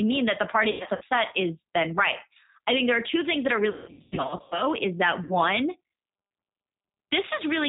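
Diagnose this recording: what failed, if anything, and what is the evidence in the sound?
The codec stage shows G.729 compression throughout at 8 kbit/s. A spectrogram would be empty above 4 kHz, and the speech has a plainly audible rough, synthetic texture. The codec rebuilds each 10 ms frame from a vocal tract filter, a pitch predictor and a few pulses.

The network stage has VoIP packet loss concealed by the speech codec at 0.71–1.04 s, 3.70–4.63 s (runs up to 180 ms) and 5.24–5.36 s. Missing frames are extrapolated into fading buzzy tones or coloured noise, which would appear as smeared harmonics or noise with sagging waveform envelopes.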